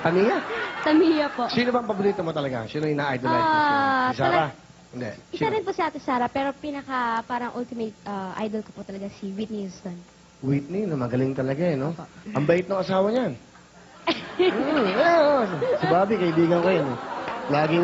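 Nothing stood out on listening; the audio carries the ordinary character of a call, with the microphone processing and call path limiting it to about 8 kHz as expected.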